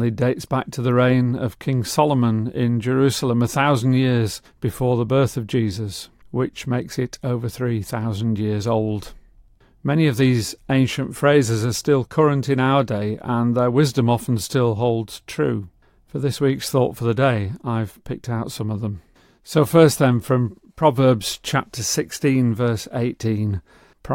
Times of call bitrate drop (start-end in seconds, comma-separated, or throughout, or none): none